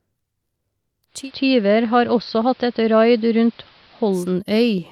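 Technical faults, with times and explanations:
1.07–4.36 s: digital radio blending to analogue. The receiver lost the digital stream and cross-faded over about 243 ms to the AM broadcast, so the speech dulls, drops about 1 dB, and gains hiss around 30 dB below. A spectrogram shows the top band cut off and a raised noise floor.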